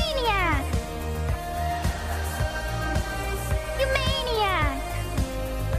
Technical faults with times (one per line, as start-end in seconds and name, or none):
0.61 compressed frames skipped